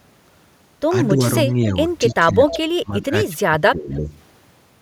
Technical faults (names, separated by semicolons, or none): speech suppressed in double talk; echo leak